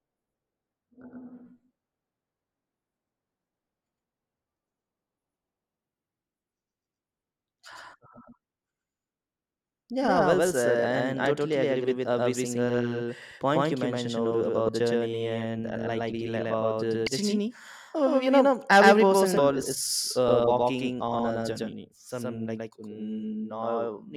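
Right from the start the whole speech track has a doubled audio track: a second full-band copy, roughly as loud as the first, trails about a tenth of a second behind with no room colour. It's likely a second capture path or an out-of-step edit.

Then come short glitches from damaged data in a compressed stream at 8.43, 11.24, 14.68 (after "point you mentioned over", before "journey and unlikely"), 17.07 (after "about the") and 19.37 s (after "you know every person"). Each time the decoder trips on bad frames and resyncs.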